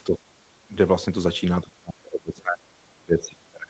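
The speech dips by about 10 dB at 0.06 to 0.22 s and about 15 dB at 0.68 to 0.74 s, then sinks by up to about 25 dB from 1.63 s to the end. This is speech suppressed in double talk, likely from an echo canceller turning down both its own talker and the loudspeaker echo.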